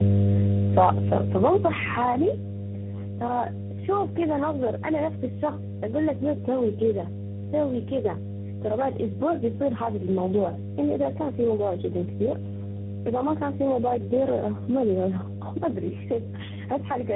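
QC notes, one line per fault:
Throughout, mains hum: a steady low 50 Hz tone with low harmonics sits at about the same level as the speech itself, so it competes with it constantly; a ground loop or nearby transformer is feeding the power line into the signal path.
Throughout, tandem speech coding: speech sounds rough, muffled and warbly, with nothing above 3.8 kHz, because it passed through three speech coders in a row, each re-encoding the previous one's damage, ending on a CVSD link.
0.05 to 2.58 s, automatic gain falling: the opening is loud and then sinks steadily by about 14 dB, background included, settling just before "ترى شوف كذا نظر"; the automatic gain control judged the input too loud or its noise too strong and pulled its gain down gradually.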